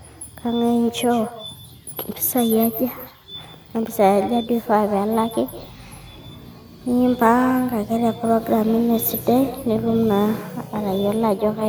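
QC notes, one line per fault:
Throughout: echo with no canceller. The far end's loudspeaker feeds its microphone unremoved, so each phrase returns about 16 dB quieter, roughly a sixth of a second later, and thin.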